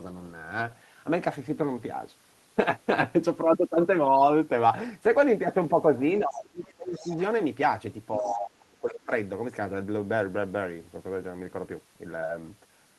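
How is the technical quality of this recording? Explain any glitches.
The recording has two related echo-control faults, both around the middle of the speech, where the far end and the near-end talker overlap.

Speech suppressed in double talk occurs from 6.19 to 7.09 s and again from 8.18 to 9.11 s. The talker's level falls by as much as about 30 dB, with roughly a second of speech affected in the later stretch. This is likely an echo canceller that could not tell the local voice from loudspeaker echo and attenuated both. The voice dips and thins, with parts dropping out.

The other side's voice leaking through shows up as brief, quiet fragments of a second voice at 6.67 to 6.74 s, 6.94 to 7.21 s and 8.17 to 8.38 s. The first sits about 35 dB below the main speech and the other two about 25 dB below. The far end's loudspeaker output reached the microphone and was likely not fully cancelled. 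These scraps coincide with the suppression dips, giving a faint background voice.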